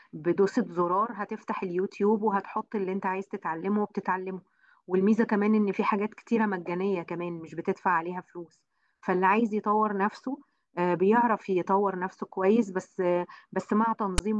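At 14.18 s, near the end of the clip, a brief, harsh burst of static cuts in with hard edges: a loud, gritty rasp lopsided toward one side of the waveform, dropping to dead silence before the clip ends. This is file tags played as audio. A block of text metadata at the end of the file has been decoded as if it were samples, so its character bytes produce the offset rasp, and the zero padding behind it comes out as silence.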